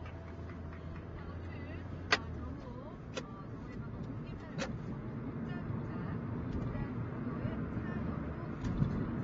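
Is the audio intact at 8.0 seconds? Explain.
No, AAC compression damage runs through the whole clip, including 8.0 s: nothing above 8.3 kHz, with a dull, smeared, warbling sound that likely fits low-bitrate AAC-LC quantisation; a spectrogram shows a hard ceiling.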